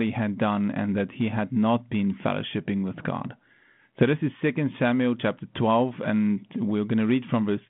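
No faults detected anywhere in the recording.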